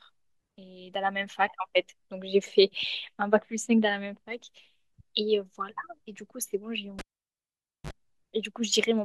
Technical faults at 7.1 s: cable pulled and plugged in

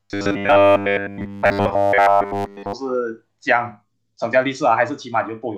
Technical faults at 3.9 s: none

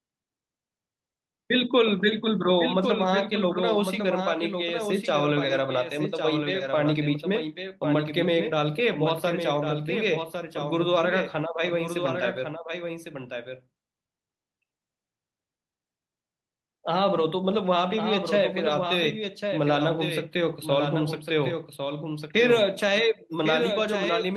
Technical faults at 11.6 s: doubled audio track; lost packet rebuilt from error correction

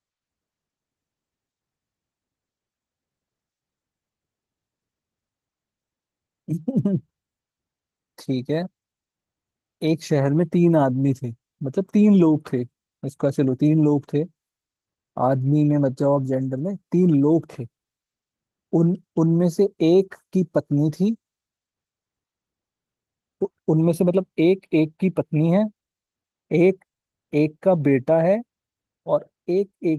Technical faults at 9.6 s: none

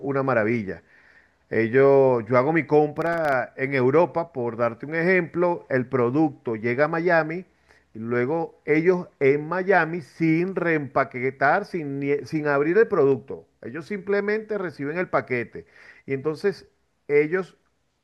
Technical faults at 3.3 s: processor overload crackle

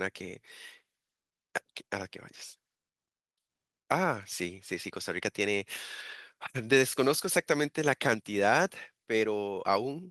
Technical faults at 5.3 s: none

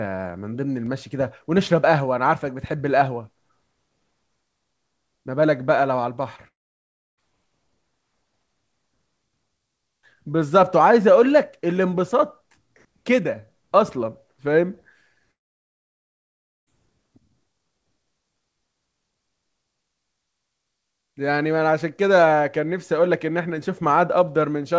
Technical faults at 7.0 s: long network dropout

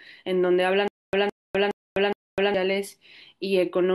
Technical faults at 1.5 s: stutter with silent gaps

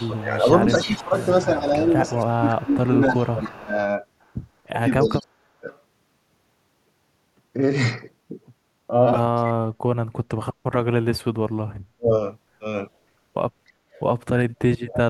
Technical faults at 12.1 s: speech suppressed in double talk

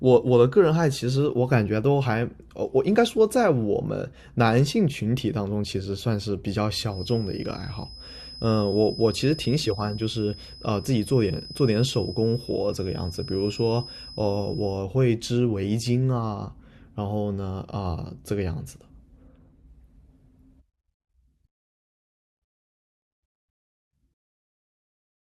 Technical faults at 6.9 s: feedback whistle

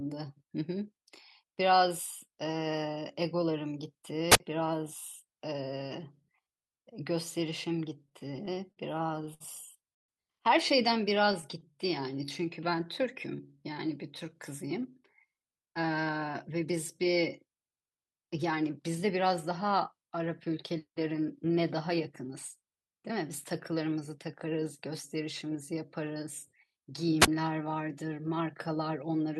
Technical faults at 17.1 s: jitter buffer speed-up

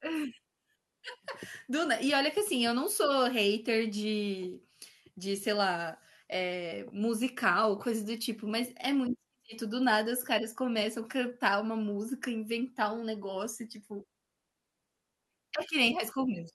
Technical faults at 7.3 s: none

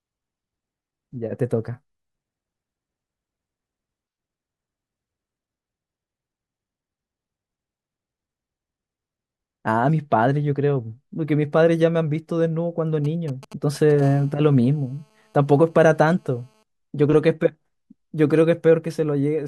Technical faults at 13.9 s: GSM signalling bursts

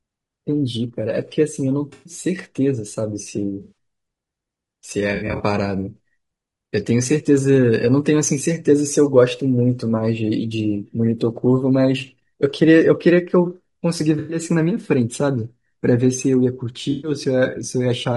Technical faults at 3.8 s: low-delay AAC compression; AAC frame loss with concealment

